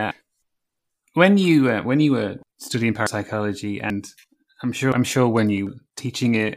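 Speech with four sudden skips at 3.07 s after "when you were studying", 3.90 s, 4.92 s before "I'm sure", and 5.67 s after "I'm sure". At each the sound jumps ahead with no silent gap, which separates it from a dropout. The first three lose about a tenth of a second and the last about a third. This is likely a dropped buffer (overrun), where unread audio was overwritten and the two sides were joined.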